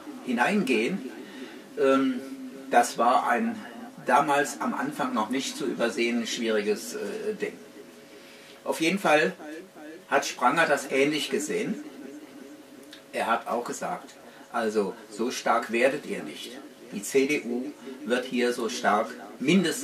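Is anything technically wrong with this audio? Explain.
No, no technical faults detected.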